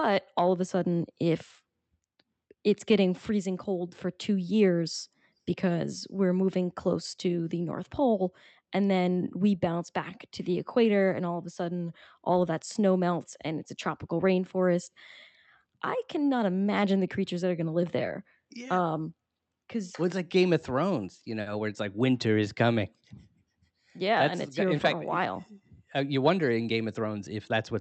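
At 21.41 s the speech briefly stalls, a short stall from a late packet lasting until about 21.48 s. A packet missed its playout time and the jitter buffer ran dry, so the receiver stretched the preceding sound by about 50 ms and then resumed at the same point, with nothing dropped. It is heard as a held sound with a slight buzzy dip, and everything after it runs about 50 ms later. The Opus call path caps the audio at 8 kHz.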